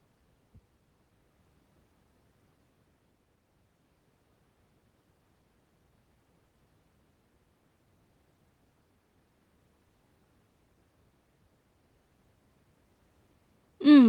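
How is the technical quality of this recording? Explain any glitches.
Listening through the recording, nothing stood out as a glitch or technical problem.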